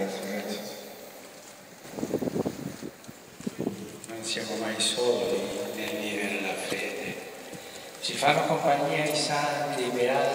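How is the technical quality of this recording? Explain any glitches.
The recording has two brief glitches of one kind. Damaged data in a compressed stream at 6.68–6.72 s and 9.08–9.12 s: corrupted bytes make the decoder misread frames and resynchronise, producing a short chirp or blip.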